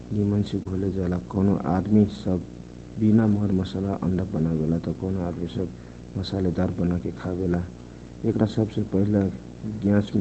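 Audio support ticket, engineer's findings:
Video or display buzz, throughout. Display or video cable coupling into the audio line. Steady buzz at the 60 Hz field rate with hash above it, roughly 15 dB under the speech. Constant bed under every phrase, independent of the call path. Check grounding, cable routing and monitor proximity to the mic or interface.

Short concealed packet loss, 0.63 to 0.67 s. About 20 ms of the stream failed to reach the decoder in time. The receiver extrapolated the preceding sound across the hole, roughly 16 ms of synthetic fill, then crossfaded back. Brief smear or wobble at that spot. Inspect the receiver's loss and late-arrival statistics.

Lost packet rebuilt from error correction, 0.67 to 0.69 s and 3.15 to 3.41 s. Opus in-band FEC recovered the losses from low-bitrate copies carried in the following packets. No gaps. The first event is a 20 ms frame, consistent with a single packet. 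The second is 140 ms of rebuilt audio, which fits a run of separate losses. The rebuilt stretches sound rougher and noisier than the surrounding 24 kbps, 8 kHz-bandwidth Opus audio.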